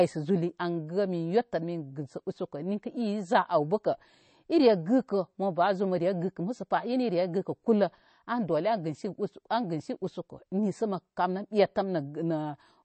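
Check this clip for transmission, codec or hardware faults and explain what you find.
There's one fault, and it runs the whole way through: MP3 compression damage you can plainly hear. Nothing comes through above about 8.3 kHz, so the speech sounds dull and boxed-in, and there's a watery, swirly texture on top. That's likely an MP3 encoder starved of bits, which fits a low bitrate around 32 kbps. It chopped off the treble at a fixed point and kept dropping weaker frequency detail in and out from frame to frame.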